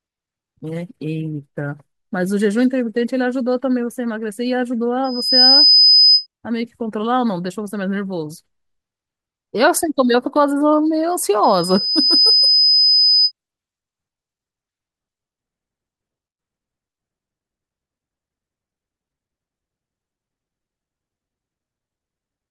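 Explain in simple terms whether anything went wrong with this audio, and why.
A thin, piercing whistle rises over the speech twice: from 5.04 to 6.27 s, where it swells quickly in under half a second and gets quite loud, and from 11.43 to 13.32 s, where it creeps up more slowly over about a second and stays a little quieter. This is loudspeaker feedback squeal. The microphone was picking up its own loudspeaker, and one high pitch, around 5 kHz, kept looping round and growing until it became a steady squeal.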